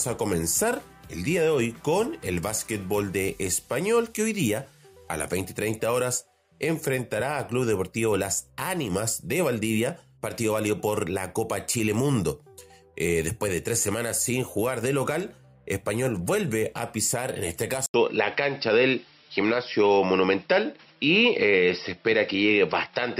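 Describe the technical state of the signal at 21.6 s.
At 21.6 s the signal sits inside a span, from 17.86 s to the end at 23.2 s, where the input has likely switched to a poorer device. A gap of 80 ms marks the switch, and afterwards the sound turns duller and boxier, with nothing above 5.6 kHz. On a spectrogram the upper band is cut off sharply there. The waveform shows a level shift of a few dB and a new, faint noise floor some 55 dB below the signal.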